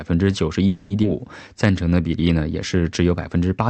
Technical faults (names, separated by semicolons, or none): call audio freeze; skip ahead; jitter buffer slow-down